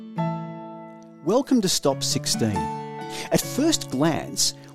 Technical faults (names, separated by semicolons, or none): none